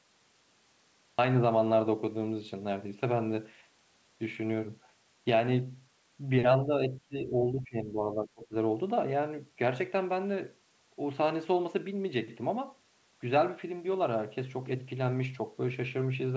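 The recording began late, a cut-off start: from 0 to 1.19 s there is only digital silence, and at 1.19 s the speech cuts in mid-sound with no natural attack, arriving abruptly rather than building up. At 6.63 to 6.72 s the talker's level dips by about 5 dB, and from 6.88 to 8.53 s it falls again by about 15 dB for roughly one and a half seconds. This is likely speech suppressed in double talk: the echo canceller could not separate the talker from loudspeaker echo and turned the speech down, so it sounds pushed back. The audio carries nothing above 8 kHz, which fits the call path's G.722 coding at 64 kbps.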